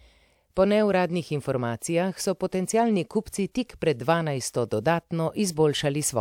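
No dropouts, clicks, distortion, level jumps or timing breaks are audible anywhere in the speech.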